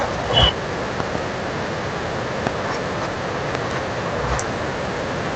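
A voltage step or pulse, likely from a plug, switch, static discharge or driver glitch, is added to the speech signal, and the downstream circuitry shapes it into a brief burst. The result is a loud pop, peaking roughly 20 dB above the speech, which continues underneath: a double pop between 1.00 and 1.17 s, a single pop at 2.47 to 2.49 s, and another double pop from 3.55 to 3.73 s. These stand out sharply against the call audio's 8 kHz-limited top end.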